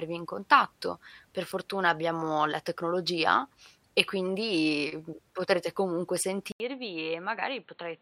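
Speech; at 6.52 s, after "e quindi potrete comunque", an 80 ms gap, then sound capped at 4.3 kHz, a little quieter, with new faint background noise: likely an input switched to a poorer device, not plain filtering.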